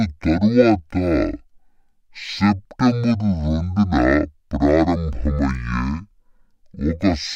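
From the very start and right through to the end, the speech plays at half speed and a full octave low, which is the classic sign of stereo read as mono. The left and right samples were interleaved, then read back one after another as a single channel. So each stretch of sound gets spread over twice as many samples. You get that slow, dragging, deep-pitched quality, plus a fainter mirrored copy sitting up in the top half of the spectrum.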